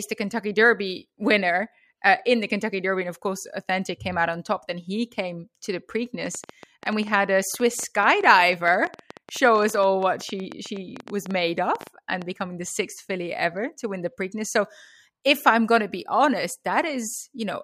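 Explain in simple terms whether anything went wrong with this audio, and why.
From 6.26 to 12.23 s there's a train of clicks, about fifty uneven ticks, nearly ten a second, ending before "becoming the sixth filly". Likely interference.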